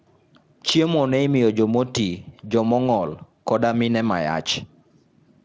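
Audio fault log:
Nothing to log here: the speech comes through a call's microphone processing, which leaves nothing above 8 kHz, and a Speex codec at a fairly generous setting, consistent with around 34 kbps.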